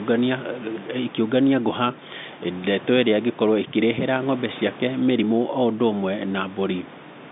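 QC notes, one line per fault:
Nothing to flag here, just an ordinary telephone-band line with a bit of room noise sitting about 18 dB below the speech.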